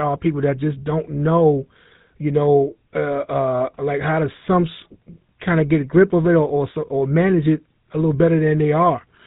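GSM full-rate codec damage runs through the whole of this speech clip, with a plainly audible buzzy, gravelly roughness. The codec rebuilds the voice from a vocal-tract model driven by sparse regular pulses, which fits the 13 kbps mode, and it removes everything above 4 kHz.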